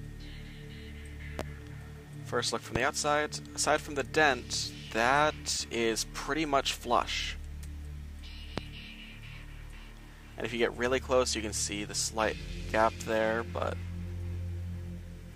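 Loud pops occur at 1.39 to 1.43 s, 2.76 to 2.79 s and 8.58 to 8.61 s. Each is a single sharp burst lasting about 30 ms, peaking roughly 15 dB above the surrounding sound for the first and about 20 dB above it for the other two, while the audio continues underneath. The likely cause is a brief voltage spike from a connector, switch, static discharge or driver glitch, which the following circuitry turns into a thump.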